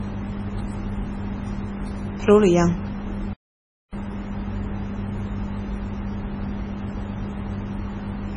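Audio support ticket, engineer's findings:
Whole clip: no content above 10.4 kHz, smeared swirly codec artefacts, despite a high-bitrate MP3 container. Likely low-bitrate audio saved at a high bitrate. The cut-off and artefacts fit a first MP3 encode near 24 kbit/s. Re-encoding cannot restore the lost band.

3.33 s to 3.93 s: speech stops mid-flow, output silent for about 0.59 s, then resumes. Likely a playback stall. Player buffer ran dry or its thread blocked. Output held silent until data returned. Check buffer underrun and thread scheduling.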